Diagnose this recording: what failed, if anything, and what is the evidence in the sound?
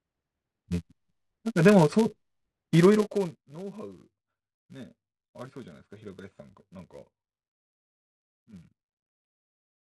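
A filter in the processing stage is restarted on every block, which points to call processing. Through the whole speech clip there is a steady buzz at 200 Hz. It rises and falls with the level of the talking. The filter loses its stored state between blocks and starts each one from silence. That leaves a small transient every 5 ms, which fits 5 ms processing blocks.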